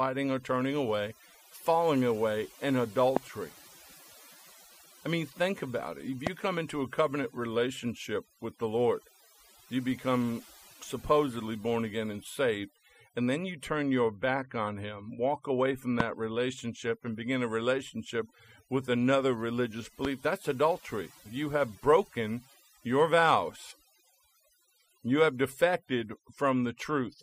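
Overdone noise removal runs through the whole speech clip. A noise reduction stage set too aggressively pulls individual frequency bands down or shuts them off whenever they sit close to its noise estimate, so the background falls away and breaks into twinkling, warbling specks between and under the speech. Unlike codec swirl, this flickering follows the noise floor itself rather than bitrate demands, and low-level parts of the speech are removed along with the noise.

A loud pop lands at 3.17 to 3.19 s, another at 6.27 to 6.29 s just before "come into a covenant", a third at 16.00 to 16.02 s between "walk away from" and "relationship and begin a", and a last at 20.05 to 20.07 s between "relationship with another religious" and "that's adultery". Each is a single sharp pop, the first and third about 20 dB above the speech and the other two about 15 dB. A sudden voltage step or pulse, likely from a plug, switch, static discharge or driver glitch, is added on top while the speech carries on underneath, unlike a dropout or splice.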